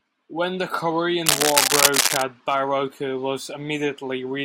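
From 1.26 to 2.23 s a dense, uneven scratching rustle sits above the speech: cable scratch noise, likely from a worn cable or connector being moved.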